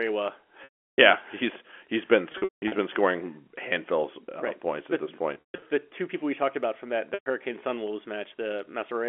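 Speech over a narrowband telephone line has packet loss with pitch repetition at 0.64–0.98, 2.32–2.72, 5.34–5.62 and 7.14–7.26 s. Missing audio up to 340 ms is bridged by a repeated pitch period that buzzes, then fades out.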